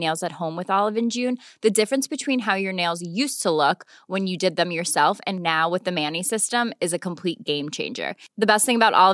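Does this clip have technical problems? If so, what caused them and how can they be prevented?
No, nothing in this speech recording points to a technical problem, so there's no cause to track down and nothing that needs preventing.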